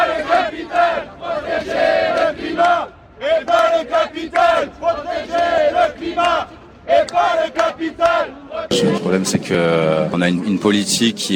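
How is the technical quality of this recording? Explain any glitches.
No glitches turn up anywhere here, so there's nothing to explain.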